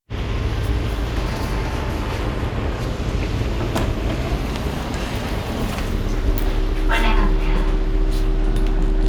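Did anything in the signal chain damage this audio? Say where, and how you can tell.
Yes. Frame-based processing damaged it, most plausibly a resynthesis step in call processing or a codec, which left overlap-add ripple across the whole clip. The level pulses by about 6 dB at roughly 300 Hz, heard as a metallic buzz with extra tones around each note, because overlapping windows failed to sum to constant gain.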